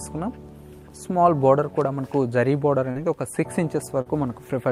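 Brief smears at 2.91 s and 4.01 s: short concealed packet loss, where about 40 ms went missing each time and the receiver extrapolated the preceding sound to fill the gap.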